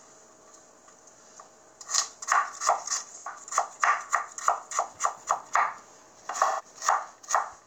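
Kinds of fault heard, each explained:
AAC frame loss with concealment: The decoder lost AAC frames and papered over the gaps by reusing the last good spectrum. The result is a smeared, noisy patch from 3.18 to 3.27 s (about 85 ms, which fits two lost frames) and again from 6.45 to 6.65 s (128 ms, fitting three). On a spectrogram each gap shows as a blurred, noise-like band with no fresh detail. The waveform has a held, featureless envelope there.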